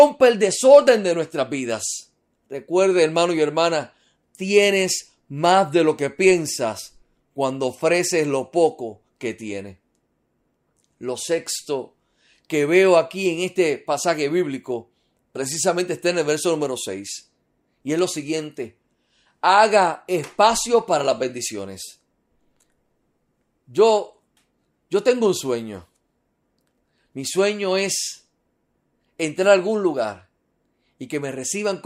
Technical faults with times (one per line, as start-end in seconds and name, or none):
6.10-14.10 resampler restarted on every block